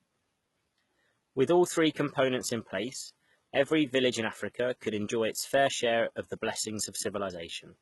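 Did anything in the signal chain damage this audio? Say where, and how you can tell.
Yes, at the codec: the treble is bright but synthetic, s sounds turn gritty and lispy, nothing above 11.8 kHz, likely heavy HE-AAC compression around 16 kbps.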